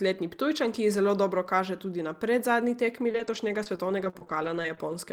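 From 3.09 s to 4.94 s, right after "tudi na predzadnji", this speech turns choppy and robotic, with more than a dozen brief dropouts, the longest 33 ms, each smoothed over by a continuation. That is repeated packet loss (robotic sound): data kept arriving lost or late, and each hole was filled by extending the preceding sound. Around 200 ms went missing, so about 11% of that stretch is concealment.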